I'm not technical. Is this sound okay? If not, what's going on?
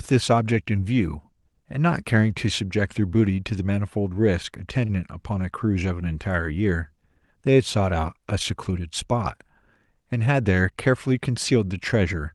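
No. There are two brief glitches from the way the call's receiver handles audio arriving over the network.

At 4.85 to 4.91 s there's a short stall from a late packet. One small piece of audio arrived late, and the receiver's waiting area, called the jitter buffer, ran empty. To avoid silence, it stretched the last bit of speech for about 37 ms until the piece arrived, then carried on where it left off. Nothing is lost, but one sound is held a touch too long and may buzz or dip slightly.

From 10.12 to 10.41 s there's a jitter buffer speed-up. The buffer had built up more audio than it wanted, so to catch up the receiver snipped out many tiny slices, removing about a twentieth of a second in total. The speech plays roughly 13 percent faster there without changing pitch, so that stretch sounds a little rushed.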